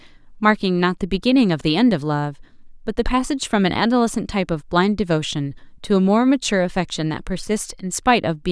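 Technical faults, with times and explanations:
No technical faults can be heard in this speech clip.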